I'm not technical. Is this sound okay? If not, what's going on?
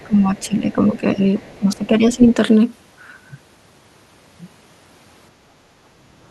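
No, there are problems, all tied to how a speakerphone-style call handles sound coming out of its own loudspeaker.

Other side's voice leaking through: brief scraps of a second voice slip in at 0.00 to 0.07 s, 0.36 to 0.40 s and 1.39 to 1.58 s, very faint at first, then a clearly more noticeable burst at 2.22 to 2.34 s. The likely cause is that the device's echo canceller didn't fully strip the loudspeaker's sound out of the microphone. What sets this apart is that you hear an extra voice, rather than the main talker changing.

Speech suppressed in double talk: from 0.03 to 1.24 s, and again from 1.58 to 2.22 s, the main speech sags and sounds held back, with the second stretch dipping further. This likely happens because both sides talked at once, so the canceller couldn't tell the talker from the echo and turned everything down. Unlike the leak, nothing is added here. The talker simply gets quieter for about a second the first time and well over half a second the second time.

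Background gated by the echo canceller: at 5.68 to 5.80 s the room sound briefly ducks for about a tenth of a second, then comes straight back. The canceller clamped the microphone while the loudspeaker played. It differs from the double-talk dips because it hits the background ambience in one short blip, not the talker's speech over a longer stretch.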